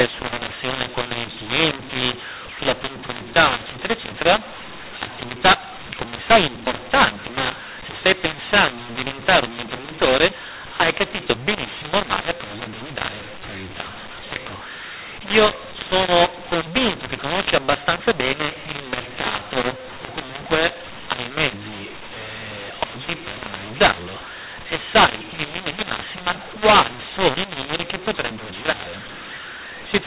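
Telephone-band speech whose content stops at 4 kHz, consistent with 8 kHz G.711 coding, suffers mu-law and A-law mixed up throughout: mu-law bytes decoded as A-law scramble levels, so the waveform looks jagged and the spectrogram shows broadband noise filling the pauses.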